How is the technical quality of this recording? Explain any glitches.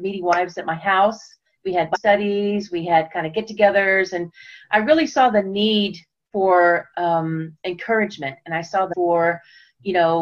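Two glitches stand out. Compressed frames skipped at 1.94–1.96 s and 8.92–8.94 s: missing or rejected frames make the audio jump ahead about a third and half a second.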